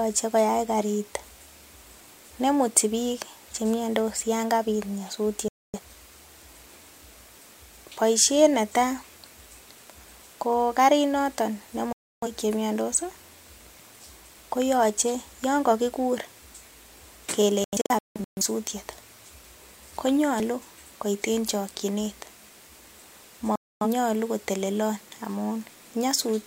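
Digital broadcast dropouts mute the speech at 5.48–5.80 s, at 11.93–12.28 s just before "che miandos", in several short holes across 17.64–18.42 s, and at 23.56–23.87 s. Each time the receiver lost good frames and fell silent, leaving blank vertical gaps on the spectrogram and flat stretches in the waveform. The jumps at 17.86 s and 20.4 s, where the sound skips ahead by a few tens of milliseconds, are likely dropped buffers (overrun). There the waveform is spliced abruptly with no silent gap.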